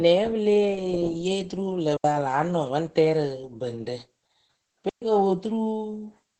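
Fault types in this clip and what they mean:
Opus voice compression: The speech is coded throughout with Opus in its SILK linear-prediction mode at 12 kbps in wideband, in 20 ms frames. The coarse excitation coding makes the damage plainly audible as a muffled, hoarse, slightly robotic quality across the whole clip.
Digital wireless dropout: The receiver mutes twice when the link loses too much data, leaving clean holes of near silence with no noise burst: about 77 ms ending just before "pa a la nɔŋ", and about 129 ms ending before "ko po".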